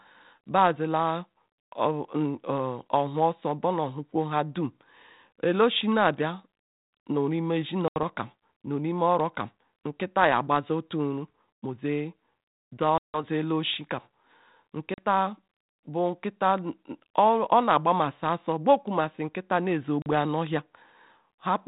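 Packet loss on an ADPCM call breaks this speech four times: 7.88 to 7.97 s (80 ms gone, a few packets), 12.98 to 13.23 s (160 ms, the longest), 14.94 to 15.01 s (40 ms), and 20.02 to 20.07 s (40 ms) right after "ne ezeh". Each gap is a hard-edged silence. Because the decoder's adaptive predictor and step size drift from the sender's, the speech comes back slightly distorted, settling within tens of milliseconds. The call runs over 32 kbit/s G.726 ADPCM.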